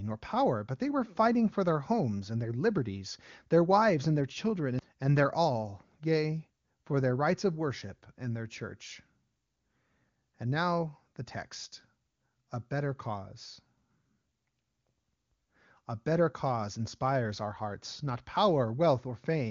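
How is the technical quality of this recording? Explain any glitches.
Nothing stood out on listening to this speech recording, which has the band-limited character of AMR wideband (HD Voice) phone coding at a quality that points to one of its higher rates.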